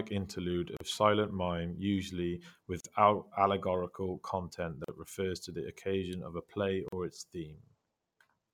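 At 0.77, 2.80, 4.84 and 6.88 s the speech drops into a gap at a join of encoded pieces, roughly 40 ms of silence every 2 s, with smeared edges. Each chunk kept its encoder start delay and end padding, so the joins hiccup.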